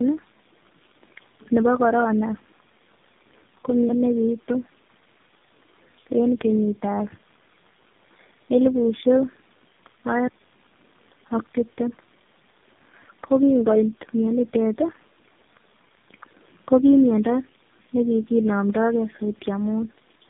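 From start to finish the speech sounds rough, muffled and warbly, with nothing above about 3.6 kHz. This is tandem speech coding: the call passed through three low-rate speech codecs in a row, with plain telephone links between them. At each border the signal was decoded and coded again, so every coder had to model audio its predecessor had already damaged, and the losses stacked up.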